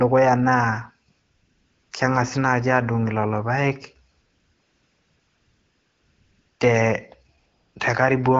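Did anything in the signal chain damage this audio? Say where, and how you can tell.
Yes, in call processing: AMR comfort noise. The phone stopped sending speech frames during pauses at 1.11 to 1.91 s (before "kengasi naaji"), 4.11 to 6.59 s (after "lolo paek") and 7.37 to 7.75 s. The receiver substituted smooth synthetic noise that switches in and out in place of the real background.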